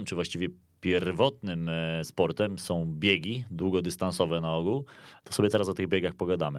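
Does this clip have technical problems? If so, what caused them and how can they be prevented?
No, this speech clip has no technical problems. There is nothing here that calls for a fix or a change to how it was captured.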